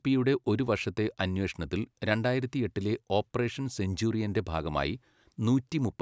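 Speech recording with no audible technical faults.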